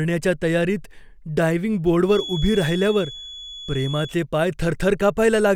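From 2.03 to 4.18 s a feedback whistle runs behind the speech: a thin 3.4 kHz tone, well below the speech level and swelling and fading slowly. The likely cause is a loudspeaker-to-microphone loop held just short of runaway. A spectrogram shows one narrow horizontal line, and the waveform barely changes.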